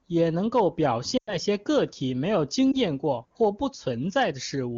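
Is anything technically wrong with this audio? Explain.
Yes, there are lost AMR speech frames. From 1.17 to 1.36 s, after "也能够表" and before "些个体没", about 100 ms is missing, fitting five frames. At 2.72 to 2.77 s, between "个体没有" and "验过或不", one 20 ms frame is lost. Radio errors failed the frames' checksums, so the wideband decoder repeated the last good pitch and vocal tract settings at falling gain. The longer run sinks to near silence within two frames, and the single frame gives a brief dip or warble. The voice returns weak or rough for a moment. Unlike an abrupt gap, the sound carries on briefly and fades. The AMR-WB coding itself sounds clear, which fits the 23.85 kbit/s mode.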